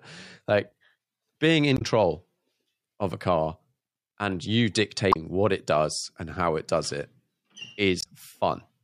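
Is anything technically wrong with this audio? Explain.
Yes. Damaged data in a compressed stream at 1.74–1.82 s, 5.09–5.16 s (between "and you" and "what it does and"), and 7.99–8.06 s: corrupted frames throw the decoder out of sync, producing brief glitches.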